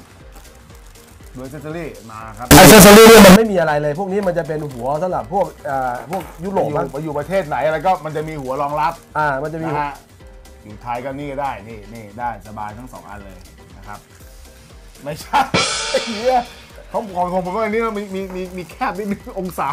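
The audio has one nasty stretch, from about 2.51 to 3.36 s, where it turns into a flat-topped, almost square wave sitting at an almost fixed, high level. It's brutally loud and harsh, and low-level background comes up as loud as the main sound, though you can still track its pitch. That's the signature of float read as integer, likely from 32-bit float samples being read back as 32-bit integers, so the sign and exponent bits end up setting the level.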